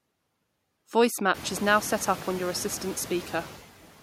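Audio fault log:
Throughout, noise suppressor artifacts: noise drops about 12 dB between words and swells beneath them, clearest after room noise rises near 1.5 s. Noise-judged bands are cut frame by frame.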